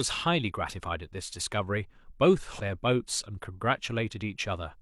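At 2.56 to 2.60 s, the speech breaks into a brief glitch lasting about 45 ms. This is damaged data in a compressed stream. Corrupted bytes made the decoder misread those frames. It lost sync and hunted for the next frame header, leaving a short disruption.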